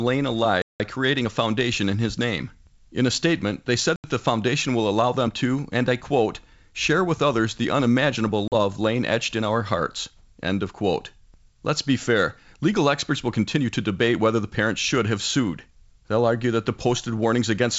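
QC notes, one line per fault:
0.62–0.81 s, 3.96–4.04 s and 8.48–8.54 s: packet loss on an ADPCM call. The G.722 stream drops out in hard-edged silent gaps of 180, 80 and 40 ms, ending before "creating a foundation in", between "a statement they said" and "the foundation will allow", and between "with others the unimaginable" and "lain etched in our". Audio is missing and replaced by silence. The decoder's adaptive predictor and step size then no longer match the sender's, so the sound comes back slightly distorted, settling within tens of milliseconds.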